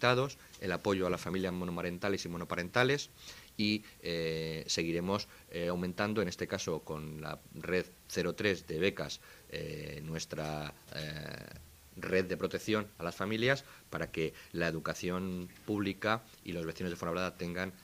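No technical faults can be heard anywhere in this recording.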